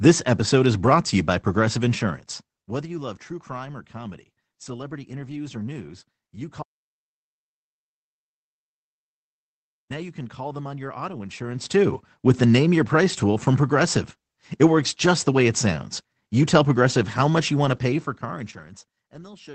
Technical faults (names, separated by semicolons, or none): audio dropout to silence